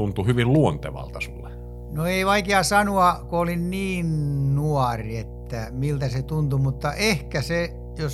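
Mains hum runs under the speech from start to finish, a steady 60 Hz tone sitting roughly 15 dB below the signal. Power-line frequency has leaked into the audio path, most plausibly through a ground loop between connected equipment or induction from a nearby transformer. It sounds like a constant low drone with some low harmonics, clearly present beneath the voice.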